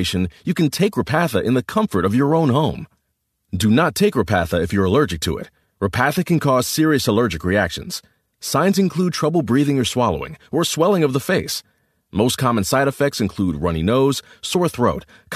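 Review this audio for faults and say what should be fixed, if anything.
No faults found in the speech; nothing needs fixing.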